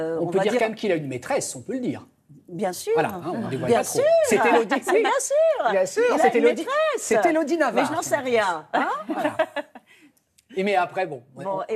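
No technical faults are audible.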